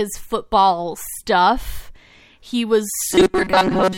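From 3.13 s to 3.98 s, the speech hardens into a rigid, metallic buzz locked at 188 Hz. It still tracks the rough shape of the talking. This is robotic sound from repeated short buffers. Fresh audio is likely arriving too slowly, so the player keeps looping a fragment of roughly 5.3 ms for most of this stretch and skips the real signal. That repetition rate imposes the fixed buzz pitch.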